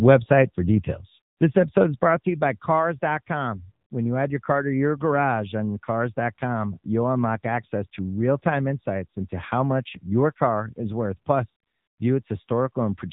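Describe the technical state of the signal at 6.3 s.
At 6.3 s the speech carries AMR narrowband mobile codec damage, present throughout. Nothing passes above 4 kHz. The pulse-driven vocal model sounds plainly buzzy and synthetic, which fits a low bitrate near 8 kbps.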